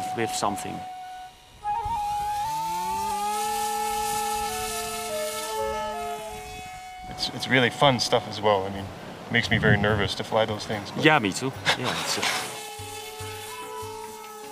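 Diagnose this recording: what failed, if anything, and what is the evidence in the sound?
From 2.45 to 3.11 s, playback runs 6.2% fast, about 104 cents sharp. From 8.41 to 10.06 s, it runs 6.2% slow, about 111 cents flat. Each shift snaps back. This is likely a drift correction step in the driver buffer, where clock matching jumped the rate.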